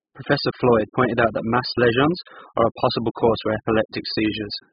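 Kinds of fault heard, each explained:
AAC compression: the speech sounds dull and heavily smeared throughout, with nothing above 5.1 kHz and a fizzy warble on sibilants. That's likely AAC-LC starved to a very low bitrate, around 8 kbps, so the coder drops the top band and coarsely quantises everything else.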